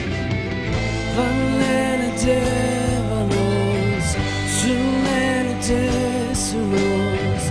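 No dropouts, distortion, level jumps or timing errors turn up anywhere in the recording.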